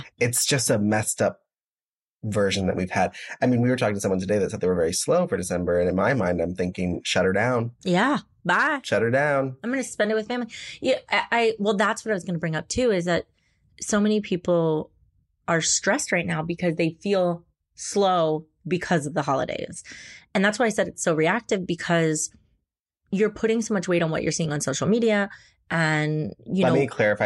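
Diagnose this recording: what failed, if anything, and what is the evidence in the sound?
Nothing in this speech recording points to a failure anywhere along the chain, so there's no fault to diagnose here.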